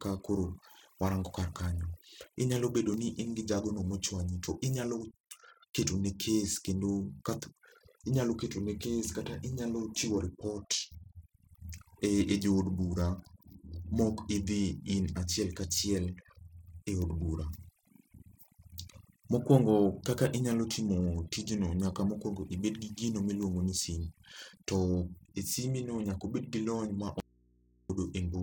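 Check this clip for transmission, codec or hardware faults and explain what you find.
Three faults turn up in this speech clip: two run throughout, and one is a short break near the end.

Overdone noise removal affects the whole clip. A noise reduction stage was set far too aggressively, pulling individual frequency bands down or out whenever their level came close to its noise estimate. The quieter parts of the voice sit in that range and get stripped along with the background. The result is near-silent gaps flecked with twinkling, chirpy specks.

Periodic clock jitter is also present throughout. The converter's sample clock is being wobbled by interference at a single rate, around 700 Hz. That timing wobble adds sidebands above and below every component of the voice, spaced at that rate and strongest on the higher frequencies. It is heard as a rough, metallic edge riding on the speech that disappears whenever the signal goes quiet.

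An audio dropout to a faint residue runs from 27.20 to 27.90 s, about 0.7 s. The likely cause is a loss of the wanted signal upstream while the path after the break stayed live and open. The speech cuts off abruptly and comes back just as suddenly. In between, only mains hum remains, at about 35 dB below the normal signal level. It is a hard cut, not a natural pause or a fade.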